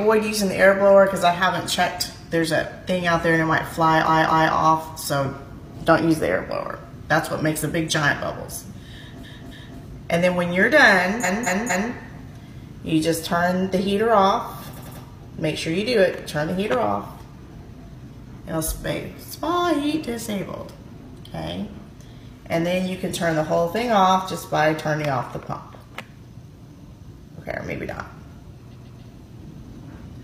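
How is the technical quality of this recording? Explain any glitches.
The recording has repeated-frame stutters at five points. Repeated frames occur at 4.04–4.51 s, 9.20–9.76 s, 11.20–11.89 s, 14.73–15.00 s and 28.70–28.98 s. A short block of compressed audio (about 93 to 279 ms) is decoded two or three extra times, so the same fragment plays back-to-back as a stutter. Each repeat adds up to 0.7 s.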